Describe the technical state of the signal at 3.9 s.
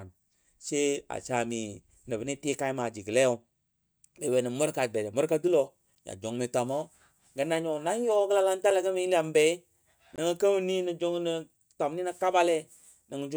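At 3.9 s the signal is intact, with no dropout, distortion, glitch or other fault to be heard at that point in the speech.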